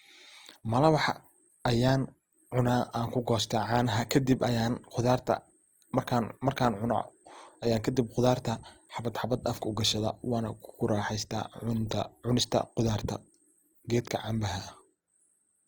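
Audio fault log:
Throughout: Opus compression, likely the cause of the plainly audible damage heard across the whole speech clip. The spectrum stays full up to about 20.4 kHz, so the music-style CELT mode has kept every band's energy. At a rate that sounds close to 24 kbps, though, it runs short of bits and refills thin bands with folded copies of lower ones or with noise. Rather than swirling, the speech turns rough and grainy.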